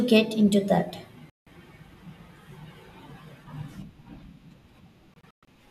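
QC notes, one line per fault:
1.30–1.47 s, digital broadcast dropout: speech mutes for about 0.17 s as the receiver loses the signal or rejects failed frames, then resumes with that stretch missing.
5.14–5.48 s, digital broadcast dropout: several short silent holes, totalling about 0.19 s, with the longest 0.12 s, as reception repeatedly fails and recovers. The audio in the gaps is gone.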